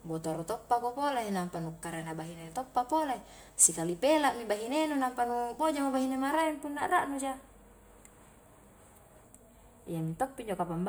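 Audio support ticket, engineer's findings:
Generation loss, whole clip: swirly, smeared speech, hollow, soft consonant attacks, nothing above 20.1 kHz. Likely several lossy re-encodes, sounds like an MP3 chain around 128 kbit/s, each pass stacking new quantisation noise and spectral holes on a shifted frame grid.

Channel delay (comb filtering), 6.41 s to the end, right after "nampa nu bojamo bahine": speech suddenly duller and phasey. One channel is lagging a few samples behind, roughly a tenth of a millisecond, and mono summing cancels a fixed notch around 5 kHz and higher ones evenly spaced above it.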